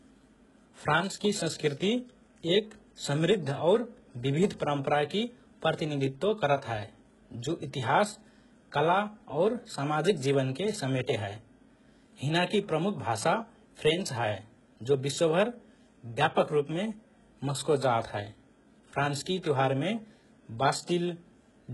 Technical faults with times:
0.00-21.73 HE-AAC compression

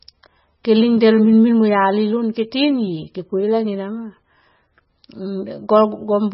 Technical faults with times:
0.00-6.33 MP3 compression

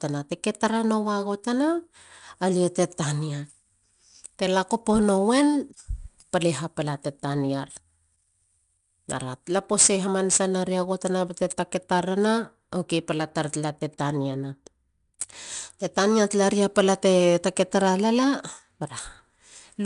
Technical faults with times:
0.00-19.86 4-bit ADPCM compression

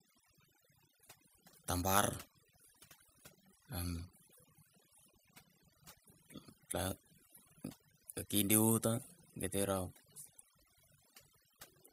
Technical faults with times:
0.00-11.93 overdone noise removal

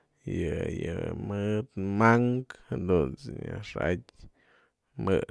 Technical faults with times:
none

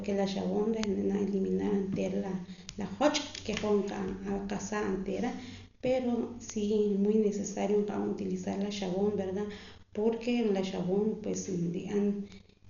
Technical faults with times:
0.00-12.69 Dolby Digital compression
0.84 bit error spike
6.50 bit error spike
11.34 bit error spike
12.32 bit error spike

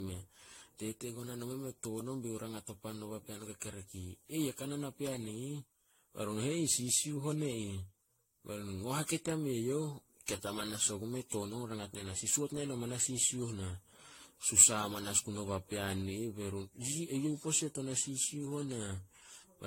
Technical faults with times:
0.00-19.67 generation loss

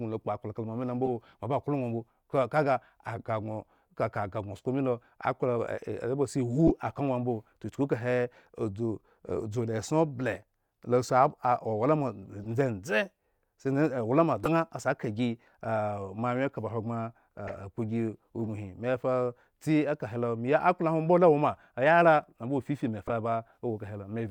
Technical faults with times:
1.05-1.08 corrupt frame decoded
6.67-6.70 corrupt frame decoded
12.44-12.46 corrupt frame decoded
14.44-14.48 corrupt frame decoded
17.47-17.59 corrupt frame decoded
23.07-23.10 corrupt frame decoded

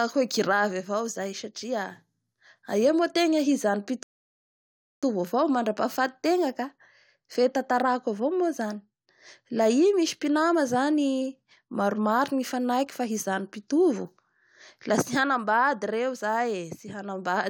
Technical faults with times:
4.03-5.03 rebuffering stall

